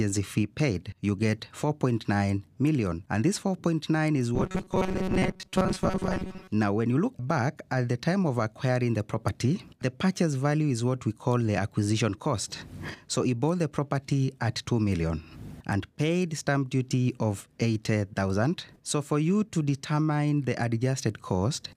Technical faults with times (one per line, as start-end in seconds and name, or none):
4.35-6.51 robotic sound from repeated short buffers